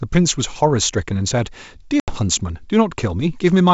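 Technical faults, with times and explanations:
2.00 to 2.15 s, packet loss on an ADPCM call: about 80 ms of the speech drops to hard-edged silence, the size of a few lost packets. When sound returns, there is brief slight distortion, because the decoder's adaptive predictor and step size no longer match the sender's and need tens of milliseconds to resync. That lingering recovery, on an otherwise clean G.722 wideband path, separates it from a plain dropout, which resumes cleanly.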